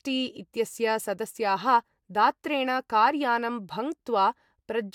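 Listening to this short speech recording, nothing technically wrong stood out at any point.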